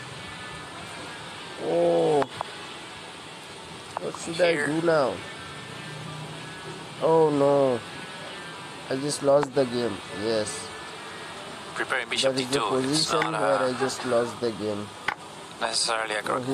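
Nothing in the audio stood out as a fault on listening.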